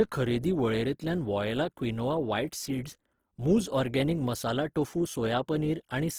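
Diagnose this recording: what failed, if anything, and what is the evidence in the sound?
Opus compression throughout, at the codec stage: the speech turns grainy and rough while keeping band energy up to 20.2 kHz, likely from CELT mode starved near 16 kbps.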